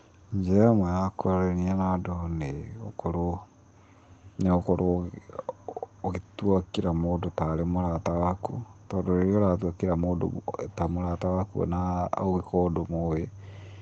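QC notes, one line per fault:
No faults were found in this speech clip. It has passed through a WebRTC call path, whose codec limits the sound to below about 8 kHz and adds coding noise, consistent with a low-bitrate Opus setting.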